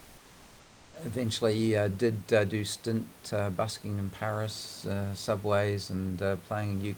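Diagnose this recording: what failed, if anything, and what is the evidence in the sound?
The fault sits at the codec stage. From 0.0 to 0.93 s the background is comfort noise in place of the background: a steady, featureless hiss about 2 dB quieter than the room noise that follows. This is likely discontinuous transmission, with the receiver synthesising noise until speech starts.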